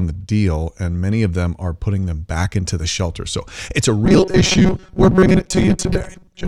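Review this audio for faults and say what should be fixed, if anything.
Robotic sound from repeated short buffers runs from 4.05 s to 6.48 s. The speech collapses into a rigid, metallic buzz at 188 Hz, which fits a loop of roughly 5.3 ms of audio being replayed. About half the material is repeated rather than new. The likely cause is input data arriving too slowly. Give the audio thread enough scheduling priority and buffer headroom that fresh data always arrives before playback underruns.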